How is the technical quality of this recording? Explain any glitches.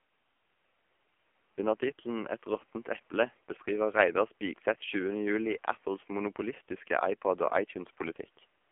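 The recording is heavily degraded by AMR narrowband mobile codec coding for its whole length. The speech passes only between 250 Hz and 3.4 kHz, which gives it a thin, telephone-like quality. The codec rebuilds each 20 ms frame from a vocal-tract model excited by a few pulses. The coding damage is heavy, which fits a low AMR-NB mode of roughly 6 kbps. The voice sounds buzzy and synthetic. The room noise sits about 40 dB below the speech.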